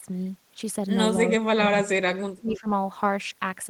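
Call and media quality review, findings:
Speech suppressed in double talk, likely an echo canceller unable to separate the near talker from loudspeaker echo during overlap, so both get attenuated. 0.03 to 0.09 s: brief dip of about 10 dB at onset. 1.3 to 2.68 s: speech repeatedly ducked and chopped, up to about 35 dB down, roughly a second lost in pieces.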